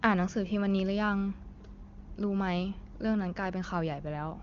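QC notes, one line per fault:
No faults found; the speech passes through the AMR wideband (HD Voice) path with little audible coding damage, which fits one of its higher rates.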